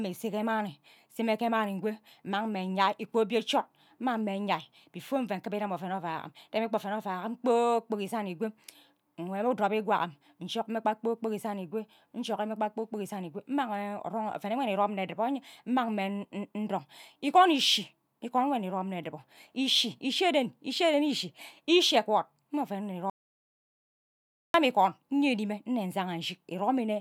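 At 23.10 s the speech cuts out dead and stays in silence until 24.54 s, about 1.44 s with no room tone at all. That's an audio dropout to silence, likely a lost input or stray mute while the recorder kept writing zeros.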